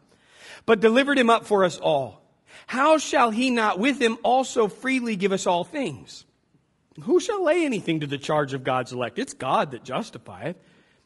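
Right through the speech there's a rough, grainy edge with noise between the harmonics, likely low-delay AAC compression at a rate that sounds close to 32 kbps.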